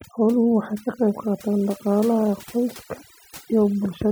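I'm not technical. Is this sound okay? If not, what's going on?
No, it has a problem: overdone noise removal, running through the whole clip. A cleanup tool was set too strong, so it chopped out quiet bits of the speech along with the background noise. That leaves near-silent gaps with little twinkly specks.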